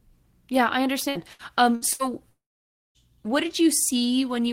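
From 1.09 to 2.02 s the speech turns choppy and a bit robotic. That's repeated packet loss: four separate holes, the longest about 63 ms, adding up to roughly 240 ms missing. Each time, the receiver papers over the gap by stretching the last bit of sound it had, so about a quarter of that stretch is concealment rather than real audio. You hear a stuttery texture with chunks clipped out.

Then at 2.29 s it goes properly quiet until 2.98 s. You get a brief smeared continuation of the last sound that dies away fast, and most of it, around 560 ms, is just silence before the speech picks up again with the middle gone. That's likely a long network dropout, with roughly 660 ms of audio never arriving and the concealment giving up after a moment.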